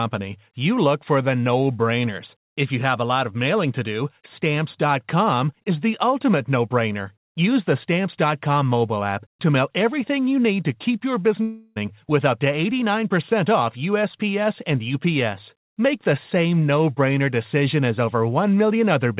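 Speech clip, heard through a narrowband call path with nothing above 4 kHz. Right after "keep your", from 11.42 to 11.78 s, the sound smears into a fading buzz until "with up to" picks up, likely a long network dropout with the receiver filling the gap.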